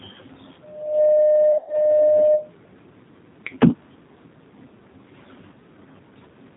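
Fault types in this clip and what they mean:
G.729 codec: The speech passes through a low-bitrate model-based coder, which fits 8 kbit/s G.729, rebuilding it from a vocal tract filter, pitch predictor and sparse pulses. Nothing above 4 kHz survives, and the voice sounds plainly rough, band-limited and synthetic throughout.
VoIP packet loss concealed by the speech codec: Around 1.52 to 1.74 s, about 120 ms of audio goes missing across 160 ms, with a 100 ms gap at most. The decoder stretches its last pitch and filter into a fading buzzy tone or coloured noise, and the voice stays weak briefly after.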